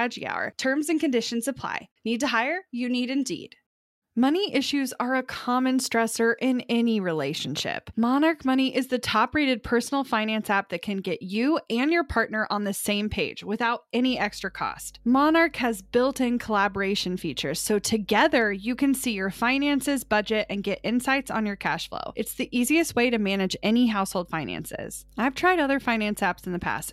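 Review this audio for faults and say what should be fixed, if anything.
Mains hum starts at 14.09 s, after "the same page without", and continues to the end. A steady 50 Hz tone, roughly 30 dB below the speech, comes from ground-loop or transformer coupling. Prevent it by fixing grounding and rerouting cables away from power supplies.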